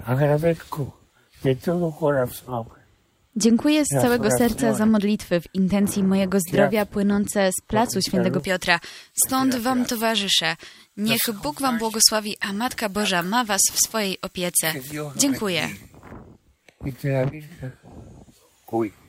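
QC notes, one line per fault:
8.39–16.12 s, pre-emphasis left on: the sound turns suddenly thin, glassy and hissy, with harsh sibilance and little body, then settles back after 16.12 s. The treble lift applied before recording or transmission was never undone by its matching de-emphasis, so highs sit about 11 dB above 1 kHz at 10 kHz, a shelf shape consistent with a J.17 curve.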